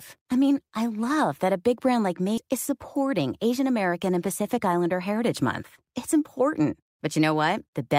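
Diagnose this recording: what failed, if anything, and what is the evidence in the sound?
Network or jitter-buffer stage: about 0.4 s of speech was discarded, causing a skip ahead at 2.37 to 2.39 s, where playback jumps forward with no gap filled.

Jitter buffer speed-up from 2.47 to 3.94 s: the receiver trimmed short pitch-period pieces to drain excess delay, so speech runs about 7% fast at unchanged pitch and sounds hurried.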